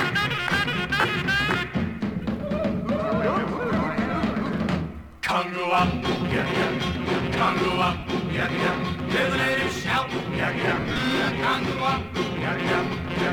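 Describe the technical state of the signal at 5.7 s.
At 5.7 s the signal is intact, with no dropout, click, distortion or level change, and only the light lossy compression that runs through the whole recording.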